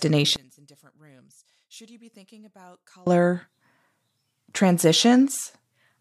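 From 0.36 to 3.07 s, summed playback drops by about 30 dB and the speech turns faint, likely one channel inverted cancelling the centred content.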